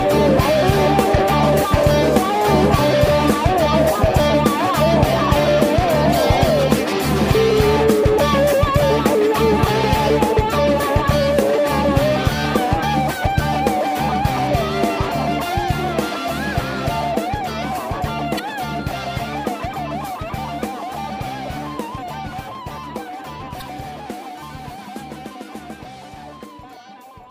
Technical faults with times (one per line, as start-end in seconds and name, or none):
3.25-3.30 damaged data in a compressed stream
6.10-6.14 damaged data in a compressed stream
12.82 damaged data in a compressed stream
18.35-18.40 damaged data in a compressed stream
23.58-23.62 damaged data in a compressed stream